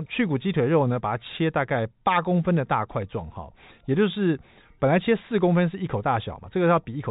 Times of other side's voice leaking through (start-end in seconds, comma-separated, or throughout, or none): none